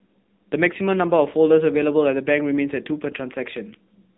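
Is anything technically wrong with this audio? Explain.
Yes. AMR narrowband mobile codec damage runs through the whole clip. This 2G/3G speech codec resamples to 8 kHz and rebuilds the speech from a vocal-tract model excited by a handful of pulses per 5 ms subframe, so the band stops near 3.8 kHz and sibilance and air vanish. The coarse, plainly audible artefacts, a buzzy and synthetic edge on the speech, point to one of the codec's lower modes, around 8 kbps.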